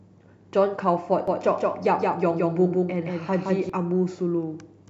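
Speech, and from 1.28 s to 3.70 s there's a doubled audio track: a second, full-band copy of the same speech trails the original by around 150 ms, roughly 5 dB down. It's dry, with no decay or room colour, and it cuts in and out abruptly at those two points. The likely cause is the audio being picked up a second time through a slower path, or an edit leaving two copies out of step.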